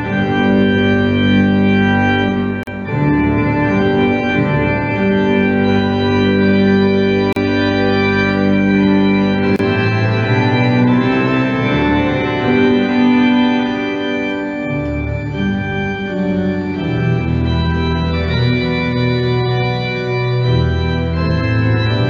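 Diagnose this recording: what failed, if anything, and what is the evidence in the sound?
The fault lies at the codec stage: gaps at joins of encoded pieces. Short silences open at 2.63–2.67 s (about 41 ms), 7.33–7.36 s (37 ms) and 9.56–9.59 s (30 ms), each with smeared edges. Separately encoded segments were spliced without trimming the encoder's start delay and last-frame padding. Unlike a network dropout, nothing is missing or concealed: the sound resumes exactly where it stopped.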